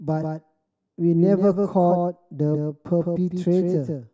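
From start to end, the speech carries a doubled audio track: a second full-band copy trails about 150 ms behind, a few decibels quieter, likely from the signal being captured twice along paths of different latency. It sounds like a flat, dry slapback, and a spectrogram shows every onset repeated as a slightly weaker, identical shadow a fixed distance to the right.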